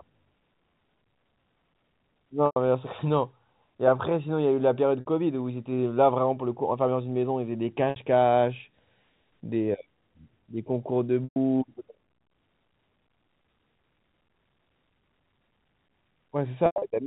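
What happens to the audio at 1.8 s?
Nothing goes wrong at 1.8 s: the speech passes through intact, with only the narrow, under-4 kHz band of G.711 telephone coding to be heard.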